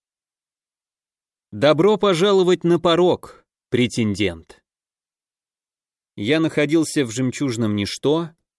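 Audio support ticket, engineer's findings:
No faults found in this audio.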